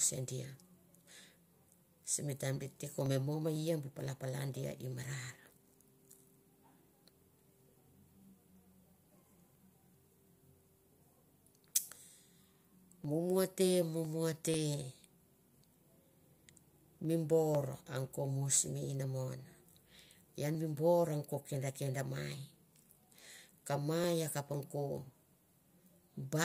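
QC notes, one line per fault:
0.06–26.04 s, periodic USB or driver dropouts: a fraction of a millisecond of the speech is skipped every 0.5 s, around fifty times, which points to a regularly scheduled background task stalling the audio driver. Each skip splices the waveform abruptly, giving evenly spaced ticks that sound only while speech is present.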